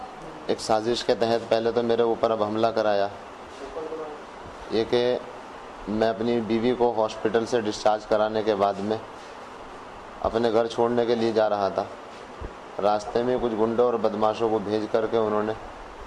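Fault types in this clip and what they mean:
No faults turn up anywhere in this one, so there's nothing to list.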